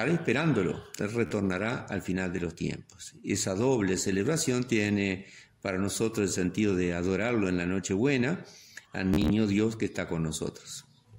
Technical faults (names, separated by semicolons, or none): Bluetooth stutter